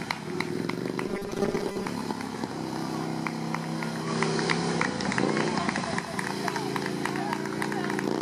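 From 1.08 to 1.86 s the sound turns into a rigid, metallic buzz fixed at 200 Hz. This is robotic sound from repeated short buffers, likely caused by starved delivery forcing a 5 ms block to be repeated, so that about half the material there is repetition.

From 4.00 to 6.06 s the digital radio blends to analogue FM over a 118 ms cross-fade. The level shifts by about 4 dB, and hiss rises to roughly 25 dB below the signal until the digital stream returns.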